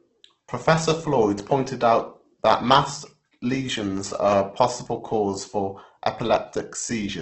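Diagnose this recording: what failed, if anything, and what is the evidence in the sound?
The speech sounds grainy and rough throughout, with nothing above 8.2 kHz. This is likely Opus compression at the codec stage, noise-filling starved bands, which fits about 12 kbps.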